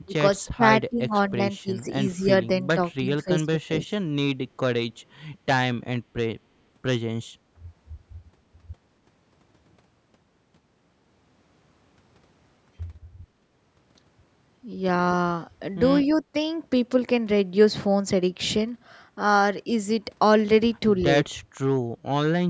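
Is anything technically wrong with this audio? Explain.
Yes. From 0.03 to 1.84 s and again from 2.17 to 4.09 s, the speech sinks in pieces, dropping by roughly 25 dB in places. The same brief dip returns from 21.3 to 21.39 s. This is likely speech suppressed in double talk: with both sides talking at once, the echo canceller could not separate this talker from the loudspeaker echo and turned the signal down.

Between 16.02 and 16.14 s, a faint, delayed copy of the voice trails about 231 ms behind the original, roughly 30 dB below the speech. This is likely an echo leak, where a far-end loudspeaker's sound reached its microphone and was not fully cancelled before being sent back.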